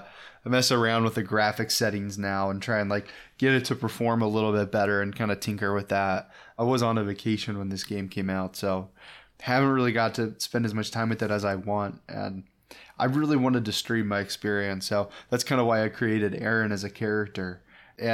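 No technical faults are audible anywhere in this recording.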